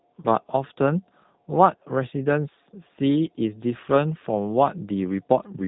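From the start the speech carries G.729 codec damage. The band stops at 3.8 kHz, and each frame is rebuilt from a filter, a pitch predictor and a few pulses, leaving a rough, synthetic edge. That fits an 8 kbit/s G.729 coder rather than simple low-pass filtering.

From 3.17 s to the end, computer activity noise appears: a faint buzzing chirp at roughly 150 pulses a second, about 40 dB below the speech. The computer's load is disturbing the audio ground. It is not mains hum, because it starts abruptly and ignores the speech.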